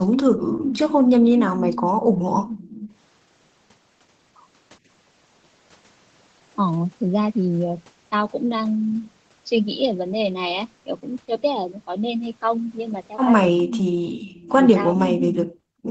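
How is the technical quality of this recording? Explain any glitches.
Sounds like a speakerphone call with shaky echo control. The audio tops out around 8 kHz, which fits a low-bitrate Opus call path, and three kinds of glitches show up.

Echo leak, 0.17 to 0.96 s, 2.46 to 2.92 s and 13.58 to 14.52 s: you hear a copy of the speech trailing about 410 ms behind. It's fairly loud in the first stretch, faint in the second, and in between in the third. The likely cause is a far-end echo canceller letting loudspeaker sound back through the mic.

Background gated by the echo canceller, 0.35 to 0.63 s and 1.97 to 2.46 s: the room sound dips by about 14 dB and then about 11 dB before coming back. The canceller clamped the microphone while the loudspeaker was playing, so the background briefly drops out.

Speech suppressed in double talk, from 14.63 s to the end: the speech sinks almost completely out. 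That's likely the canceller hearing both sides at once, failing to separate the talker from the echo, and turning everything down hard.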